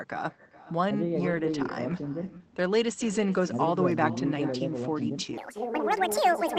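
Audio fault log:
Throughout: echo with no canceller. The far end's loudspeaker feeds its microphone and nothing removes it, so the talker's own speech returns after the network round trip. Every phrase is trailed, roughly 0.4 s later, by a copy about 17 dB quieter that sounds thin.
1.31, 1.37, 1.47, 1.51, 1.59, 1.67, 1.91, 2.05 s: lost packet rebuilt from error correction. Eight separate 20 ms packets went missing, and each was replaced by the low-bitrate backup copy carried in the following packet. There is no gap, but these moments sound briefly rougher and noisier than the surrounding speech.
2.37 to 2.42 s: short concealed packet loss. About 20 ms of audio never arrived in time, so the receiver extended the preceding sound to cover a 24 ms stretch and then blended back into the real signal. This is heard as a brief smear or wobble.
5.38 to 6.58 s: section at the wrong speed. The final stretch plays 1.82 times faster than it was recorded, likely because it was played against the wrong clock. 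Pitch and pace rise together, by close to ten semitones, so the speech turns high and hurried.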